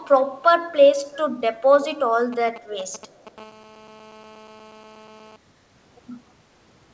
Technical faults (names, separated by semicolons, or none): echo leak; GSM signalling bursts; GSM phone buzz